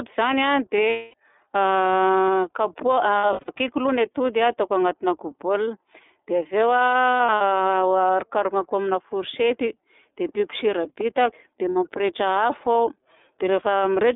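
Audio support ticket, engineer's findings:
iLBC codec, throughout: band-limited to roughly 250 Hz to 3.6 kHz, plainly rough and synthetic. Fits 13.33 kbps iLBC with 30 ms frames. Unlike a plain low-pass line, the roughness sits in the excitation itself, not just missing highs.

Lost iLBC frames at 0.89–1.14 s (240 ms solid), 3.18–3.49 s and 7.11–7.41 s (losses scattered over 300 ms, short runs up to roughly 70 ms), and 11.70–11.76 s (60 ms). Gaps sound like a held, buzzy vowel from repeated pitch cycles. Recovery is immediate afterwards, unlike codecs that smear errors into following frames.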